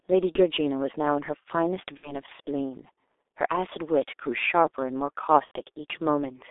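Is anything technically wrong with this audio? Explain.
Yes. The whole clip has passed through the G.723.1 codec at about 6.3 kbit/s, and three short stretches show VoIP packet loss concealed by the speech codec.

The G.723.1 coding is heavy throughout. The speech is confined to roughly 300 Hz to 3.6 kHz, so it sounds muffled. The codec's slowly updated voice model also makes it hoarse and smears consonants, which plain band-limiting would not do.

The packet-loss concealment shows up at 0.33–0.42 s, 1.97–2.21 s and 5.45–5.51 s. The gaps fit one, two and three lost 30 ms frames. The decoder filled each gap from its last pitch and filter while lowering the gain. Instead of a click, you hear a fading buzzy or noisy smear, which in the last gap is muted from the third lost frame, and the speech stays weak briefly afterwards.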